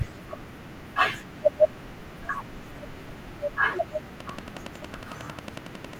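From 4.20 s to 5.94 s a train of clicks runs at a steady 11 per second, about twenty sharp ticks standing well above the speech, likely interference or a faulty connection. Their near-identical shape and even spacing set them apart from random crackle.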